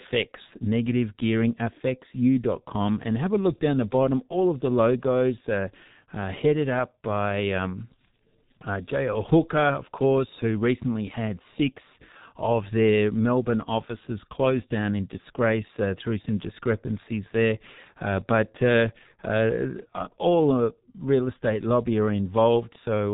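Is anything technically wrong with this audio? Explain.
Yes. Throughout the speech, G.723.1 codec damage is heavy: nothing above 3.8 kHz, and coarse 30 ms frame modelling, consistent with a roughly 6 kbit/s rate, leaves it muffled, hoarse and slurred.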